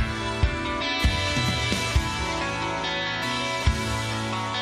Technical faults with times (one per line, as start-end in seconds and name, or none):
0.80-0.82 damaged data in a compressed stream
3.22 damaged data in a compressed stream